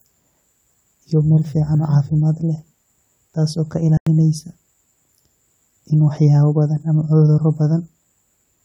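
Right after "taas oo ka", at 3.97 s, a corrupt frame muted leaves an abrupt 0.09 s silent hole, about four damaged codec frames the decoder dropped.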